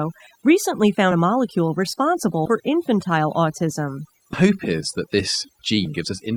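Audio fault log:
Throughout: overdone noise removal. The background is near-silent and scattered with twinkling specks. A noise reducer set far too strong is shutting off individual frequency bands near its noise estimate, and quieter parts of the speech are removed along with them.
1.11–1.14 s, 2.45–2.50 s, 4.33–4.37 s and 5.85 s: compressed frames skipped. Each is a point where the speech jumps ahead, by roughly 70 ms, 70 ms, 100 ms and 70 ms. The first comes just before "a molecule responsible". These jumps fit whole 20 ms frames missing or rejected by the decoder.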